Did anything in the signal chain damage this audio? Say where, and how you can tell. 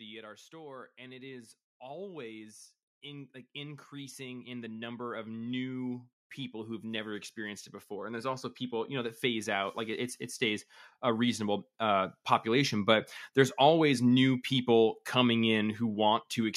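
Yes, automatic gain rising in the call processing. From 0.22 to 10.21 s the speech and background swell together by about 19 dB, then creep up another 3 dB or so from 11.0 to 12.99 s. The AGC judged the input too quiet and kept raising its gain.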